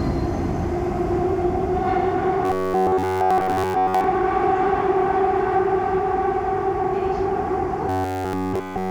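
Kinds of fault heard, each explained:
Robotic sound from repeated short buffers: From 2.45 to 4.04 s, and again from 7.89 s to the very end, the sound collapses into a stiff, metallic buzz pitched at 93.8 Hz. That's likely a playback path starved of fresh audio, looping a roughly 10.7 ms slice over and over, and in these stretches it's essentially all repeats. The loop length sets that fixed pitch, while the underlying sound only loosely shows through.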